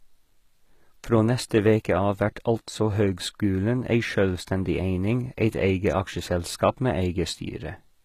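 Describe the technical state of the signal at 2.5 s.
At 2.5 s the speech carries the same damage heard across the whole clip, most likely HE-AAC compression. Only the lower spectrum is coded. The treble is rebuilt by copying lower bands upward under a coarse envelope, so its harmonics fail to line up, and sibilants sound gritty and lispy. That plainly audible damage fits a bitrate near 20 kbps. On a spectrogram, nothing appears above 14.9 kHz, and the upper band shows smeared, repeated texture rather than clean harmonics.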